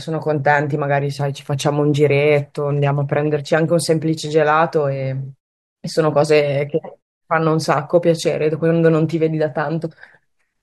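No technical faults can be heard in this speech recording.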